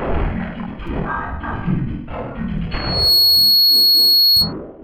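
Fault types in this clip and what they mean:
repeated buffer: The playback device ran dry and replayed its last chunk, a tiny one of 5.8 ms, which fits a 256-sample buffer. At 0.87 s it repeats twice more and at 2.58 s once, so each shows up as a quick click or buzz.
loudspeaker feedback squeal: The mic is hearing its own loudspeaker, and around 4.3 kHz the loop gain tips past one. From 2.71 s a tone swells up over roughly 0.4 s and holds as a piercing squeal, about 10 dB above the sound, until 4.53 s.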